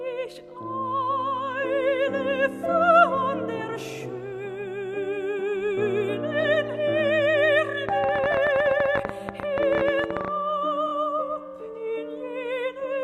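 From 7.89 to 10.29 s a train of clicks, roughly 40 irregular pulses at about 16 per second standing about 15 dB above the signal, likely from electrical interference. At 10.87 s, repeated frames: a 23.2 ms block, consistent with one compressed frame, plays twice more, giving a brief stutter and adding 46.4 ms.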